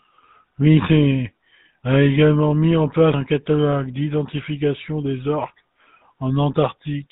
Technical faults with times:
0.00-7.12 GSM full-rate codec

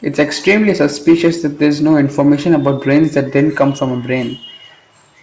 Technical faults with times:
none

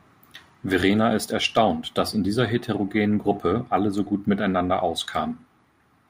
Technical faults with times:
none

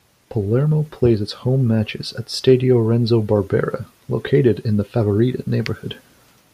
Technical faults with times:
none

